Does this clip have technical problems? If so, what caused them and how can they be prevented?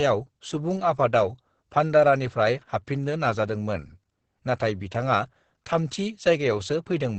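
Yes. Throughout the speech, Opus voice compression in its SILK mode makes the sound muffled, hoarse and faintly robotic, which fits a bitrate near 10 kbps. A spectrogram shows nothing above 8.5 kHz and smeared harmonics below. Encoding at a higher bitrate prevents this.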